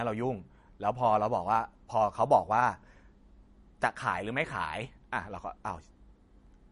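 MP3 compression damage runs throughout this speech clip, with nothing above about 10.6 kHz and a watery, swirling texture on sibilants. Likely cause: an encoder short of bits, which fits roughly 40 kbps, cutting the treble and zeroing weak frequency lines frame by frame.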